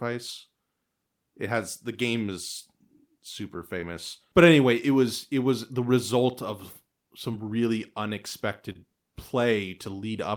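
Three stretches of about 20 ms of speech arrived too late for the decoder, each consistent with a single lost 20 ms packet. This is short concealed packet loss, heard at 3.80 to 3.83 s, 7.31 to 7.34 s and 8.72 to 8.84 s. The receiver patched each gap by extending the preceding sound for 21, 17 and 28 ms and then crossfading back, producing a brief smear or wobble. In the last one, 8 ms of audio was also dropped.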